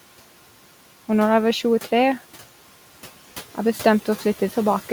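Noise suppressor artifacts run through the whole speech clip. The suppressor estimates which frequency bands hold steady background noise and pulls them down frame by frame, here by about 12 dB. Because the gain tracks the speech, the room noise, sitting about 18 dB below the speech, drops away in the gaps between words and comes back up underneath them. That gives the background an audible pumping, gated quality rather than a constant floor.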